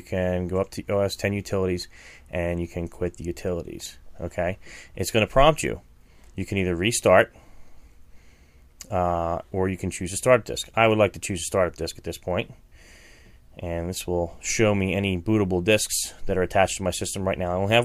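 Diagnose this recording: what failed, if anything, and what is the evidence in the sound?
Nothing in the chain audibly failed, with no fault evident at any stage from analogue wiring through converter, buffer, format conversion, processing, transmission, storage or playback.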